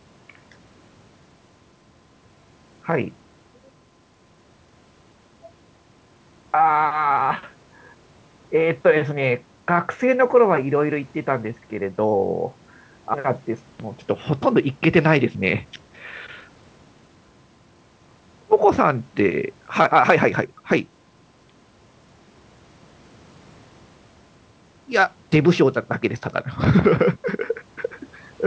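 At 13.14 s, a skip ahead: about a second of speech was dropped while later audio waited, so playback jumps forward with no gap. From 14.98 to 15.97 s and again from 16.41 to 17.16 s, jitter buffer speed-up: the receiver trimmed short pitch-period pieces to shrink its excess delay, so speech runs at 109% and then 114% speed at unchanged pitch and sounds hurried. Through the G.722 call path the band stops at 8 kHz.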